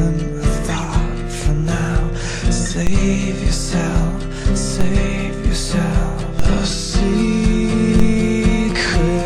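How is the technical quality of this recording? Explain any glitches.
The recording has four DC steps, at 2.87, 4.81, 6.39 and 8.00 s. Each time the waveform's zero line jumps by about -6 dBFS, then slowly settles back through a 2 Hz high-pass. Each step is a low thump, visible as a sudden baseline shift and a brief low-frequency smear on the spectrogram.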